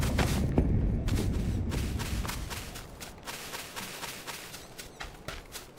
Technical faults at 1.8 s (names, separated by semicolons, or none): periodic clock jitter